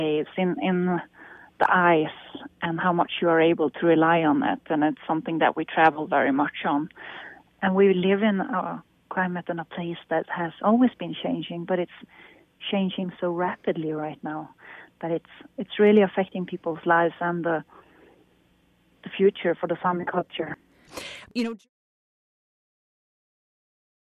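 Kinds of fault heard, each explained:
Nothing here needs flagging; the only change worth mentioning is the level gently easing away toward the end, from around 21 s to about 21.7 s, just as an editor would finish it off.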